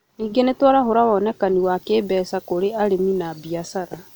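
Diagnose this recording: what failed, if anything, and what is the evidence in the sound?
From 1.63 s, right after "nĩ tũraarahũra wonekani", the speech turns thin, bright and hissy, with sibilants sharpened to the end. This is pre-emphasis left on at storage or playback: treble sits about 8 dB high at 10 kHz, consistent with the 50/15 µs CD curve never de-emphasised.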